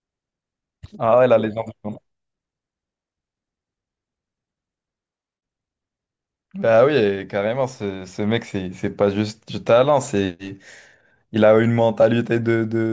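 No technical faults are audible.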